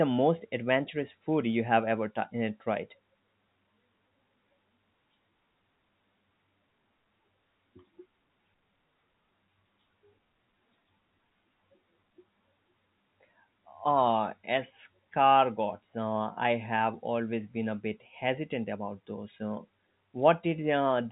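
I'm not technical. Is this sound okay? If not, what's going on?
Yes, nothing is wrong with this speech recording.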